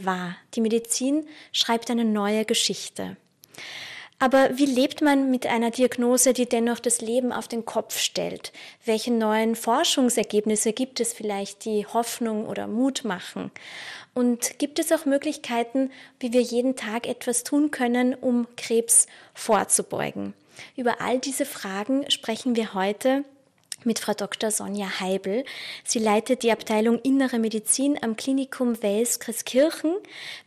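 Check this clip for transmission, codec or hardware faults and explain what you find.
Two faults are audible: codec damage across the whole clip and a short burst of reception errors.

MP2 compression runs throughout and is plainly audible. The likely cause is MPEG Layer II coding at a low rate, consistent with about 80 kbps. Starved of bits, the upper sub-bands drop out or flicker and the remaining bands are coarsely quantised, so the sound is dull and gurgling.

DAB burbling occurs from 10.12 to 10.23 s. Bit errors slipped past error correction into the MP2 data, corrupting samples across eight frames. The wrong samples put short blips of noise into single sub-bands, producing a brief burst of burbling over the sound.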